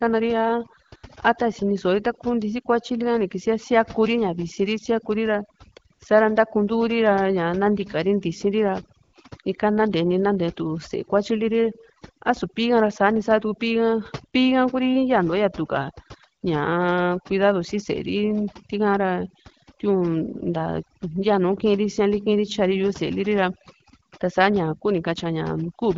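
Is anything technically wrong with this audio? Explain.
Yes, there are two faults. Overdone noise removal runs through the whole recording. A noise reducer set far too aggressively pulls individual frequency bands down or out wherever they sit near its noise estimate. The background drops and breaks up into twinkling specks, and quiet parts of the speech go with it.

AMR comfort noise appears at 0.87 to 0.91 s, 0.95 to 1.03 s, 5.93 to 5.99 s and 9.03 to 9.13 s, with gaps of 40 to 100 ms. Speech frames stopped and the receiver filled the gaps with synthetic noise built from a coarse level and spectrum estimate. The real background gives way to a smooth, steady hiss that switches in and out. The speech carries the light, clear coding of AMR-WB HD Voice, consistent with a rate around 12.65 kbit/s.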